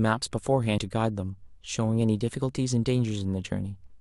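Compressed frames skipped at 0.77 s in this speech clip: the audio jumps forward by about a tenth of a second, which fits roughly five whole frames that were missing from the file or rejected by the decoder as damaged. After the join, the speech resumes further along than it should.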